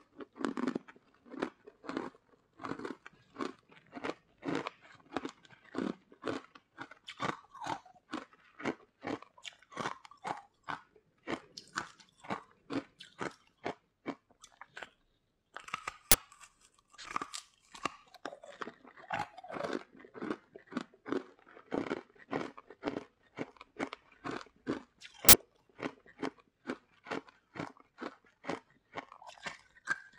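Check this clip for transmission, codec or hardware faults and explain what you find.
Two uninitialised buffer bursts occur, at 16.12 to 16.14 s and 25.29 to 25.33 s, lasting 23 ms and 46 ms, which fits 1024- and 2048-sample blocks. Blocks were played before being filled, so stale memory sounds as loud digital noise, seen as dense slabs on the waveform and broadband vertical bands on a spectrogram.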